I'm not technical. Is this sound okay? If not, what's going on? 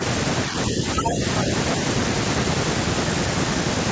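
No. Speech suppressed in double talk happens twice, from 0.70 to 0.85 s and from 1.02 to 1.21 s, when the voice briefly sinks. The likely cause is that someone on the other end of the call spoke at the same moment. The call's echo control couldn't tell this talker apart from the returning sound of the other person, so it turned everything down for a fraction of a second.

The other side's voice is leaking through, from 1.05 to 1.10 s, inside the second dip. A short scrap of a second voice comes through, about as loud as the main talker. It is likely the other person's voice playing from this talker's speaker and being picked up by their microphone, with the echo control failing to strip it out in that instant.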